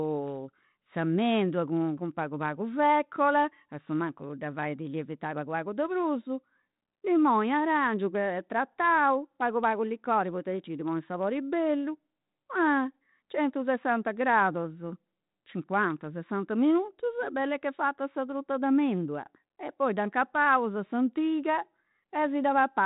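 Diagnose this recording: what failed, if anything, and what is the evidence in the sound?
Nothing in this speech recording has failed at any stage. The G.726 ADPCM path at 32 kbit/s is working as designed: everything above 4 kHz is cut off, and there is only a light, level-following graininess from its coarse difference coding.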